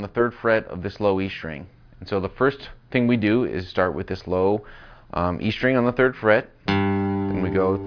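No technical faults can be heard anywhere in this audio. There is nothing in it to mark at any point in time.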